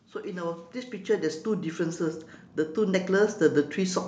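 From 0.12 s to 4.03 s, automatic gain rising lifts the speech and background together by about 12 dB, a slow swell rather than a sudden step.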